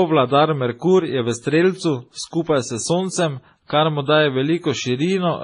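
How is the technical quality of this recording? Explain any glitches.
The quality is compromised throughout the speech. From start to finish the sound is dull and smeared, with nothing above 10.5 kHz and a layer of swirly, watery artefacts over a grainier coarseness. This likely reflects transcoding between lossy codecs, pointing to a low-rate MP3 re-encoded as WMA. The second encoder spent bits reproducing the first one's damage, added its own, and kept the MP3's low cut-off.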